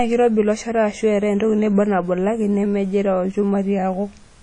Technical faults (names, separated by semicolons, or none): WMA compression